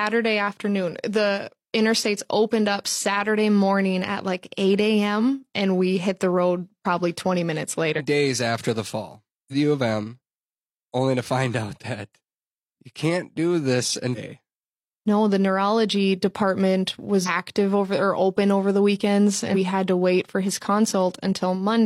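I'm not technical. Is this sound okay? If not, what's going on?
No. The speech has brief chirps or blips at 7.94, 9.48, 14.12, 17.23 and 19.51 s, each lasting about 50 to 70 ms. These come from damaged data in a compressed stream: the decoder misreads corrupted bytes, briefly loses its place, and resyncs.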